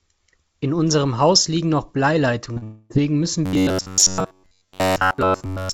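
A speech recording carried over a call path whose band stops at about 7 kHz, consistent with a G.722 wideband codec, shows three distinct faults. Two short concealed packet losses sit back to back at 2.54–2.58 s and 2.58–2.63 s, with about 20 ms and 40 ms of audio missing. The receiver bridged each hole by extending the preceding sound, so that short span smears and wobbles rather than going silent. Directly after, from 2.63 to 2.92 s, comes a long network dropout: roughly 260 ms never arrived, likely through network loss, and concealment stretched the last sound across the entire gap as a fading buzz or hiss without reaching silence, with the speech resuming later minus the lost portion. From 3.46 s to the end of the clip the sound turns into robotic sound from repeated short buffers. Most of that audio is replaced by repeats of one short segment, imposing a rigid metallic buzz at 93.8 Hz, which fits a buffer of about 10.7 ms being looped while the real audio is skipped.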